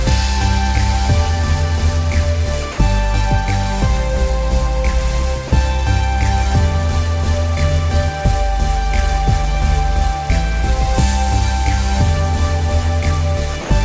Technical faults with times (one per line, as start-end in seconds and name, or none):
2.72-2.78 sound dropped by the voice detector
5.48-5.51 sound dropped by the voice detector
13.61-13.70 sound dropped by the voice detector